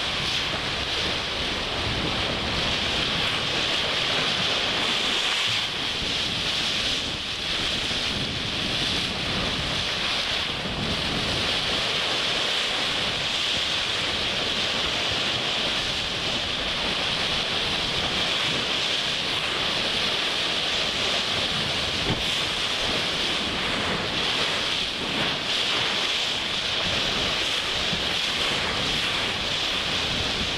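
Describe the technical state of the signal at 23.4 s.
At 23.4 s the signal is intact, with no audible fault at that moment.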